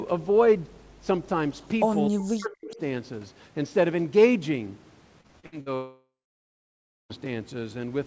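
From 2.08 to 2.73 s the speech dips sharply, falling by roughly 40 dB at its deepest and losing level in pieces across about 0.7 s, so the talker seems to pull away and break up mid-phrase. This is speech suppressed in double talk: with both sides likely talking at once, the echo canceller could not tell this talker apart from loudspeaker echo and turned everything down together.

Right at the tail of that dip, from 2.71 to 2.76 s, a faint, brief scrap of sound arrives about 20 dB below the speech, trailing the original by 262 ms. That short delayed ghost is an echo leak. The far end was likely playing the call on a loudspeaker, and its echo canceller let a fragment of what its microphone picked up slip back into the call.

From 5.21 to 5.69 s the sound turns choppy, with five short holes, the longest 69 ms, patched by stretching the preceding sound. Around 240 ms of real audio is missing, and about half of this stretch is concealment rather than genuine signal. 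This is repeated packet loss producing robotic sound, with losses arriving so close together that each hole follows soon after the last.

Soon after, from 5.75 to 7.13 s, a long network dropout takes over. The last sound is drawn out as a fading buzz, then roughly a second of silence follows, and the audio resumes only at 7.13 s. About 1.35 s of material never arrived, most likely because packets stopped reaching the receiver altogether, so that stretch is simply lost.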